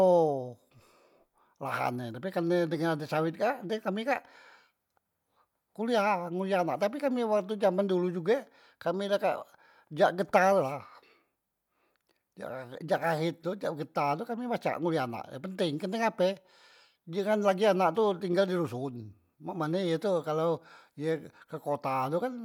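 No technical faults can be heard anywhere in the speech.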